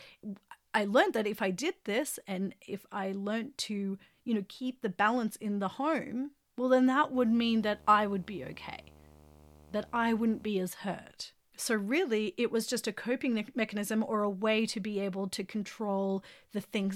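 From 7.14 s to 10.48 s, video or display buzz sits under the speech: a screen or video cable is coupling into the audio path, adding a 75 Hz buzz at the picture's field rate with hash above it, roughly 25 dB below the speech.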